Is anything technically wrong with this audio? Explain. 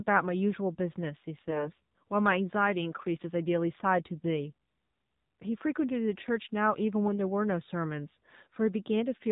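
Yes, there are two faults in this speech.

Throughout, the AMR narrowband mobile codec is plainly audible. With nothing passing above 4 kHz, the voice sounds boxed-in and telephone-like, and its buzzy, synthetic texture fits a low rate around 7.4 kbps. That texture sets it apart from simple low-pass filtering, which dulls the sound without making it artificial.

From 1.40 to 1.70 s, AMR bit errors turn the voice hoarse, scratchy and gargly. Flipped bits, a few percent of them, misplaced the excitation pulses and skewed the fine gain and spectral values. Pitch and level hold, which distinguishes this from dropped frames, where sound goes missing or is concealed.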